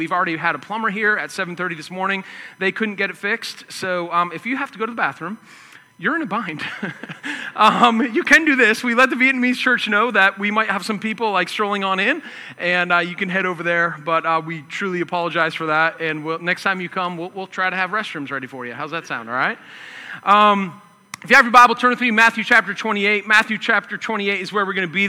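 A steady whine at 1 kHz runs through the whole recording. This is USB whine. The bus draws current in 1 ms frames, and that pulsing leaks into the audio through shared power or ground. It sits roughly 40 dB below the signal.

Hard clipping follows in two clusters. It occurs at 7.61 to 7.86 s, 8.32 to 8.36 s, 8.99 to 9.05 s, 10.18 to 10.27 s, 20.31 to 20.46 s, 21.33 to 21.65 s, 22.18 to 22.59 s and 23.32 to 23.70 s. Peaks exceed the stage's limit by about 1 to 8 dB and are cut flat. This adds crackly, harsh high harmonics.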